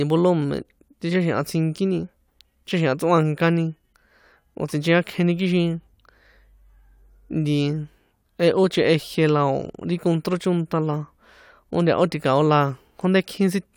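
No technical faults can be heard anywhere in the speech.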